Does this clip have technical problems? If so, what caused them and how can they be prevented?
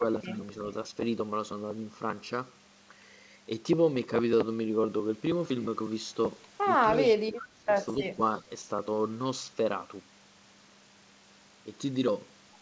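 Yes. At 0.0–0.06 s, 6.97–7.69 s and 8.0–8.21 s the speech ducks by about 10, 25 and 10 dB. This is speech suppressed in double talk, likely an echo canceller turning down the near talker as well as the far echo. The waveform shows notches and the spectrogram shows fading bands. Better double-talk detection or headsets would prevent it.

At 6.97–7.13 s, 8.0–8.05 s and 8.37–8.41 s a faint copy of the speech arrives 289 ms late, about 20 dB below the speech and about 30 dB below at the last point. This is echo leak, likely loudspeaker pickup that the canceller left in. It shows as dim, delayed repeats of the speech's harmonic streaks. Stronger echo cancellation or headsets would prevent it.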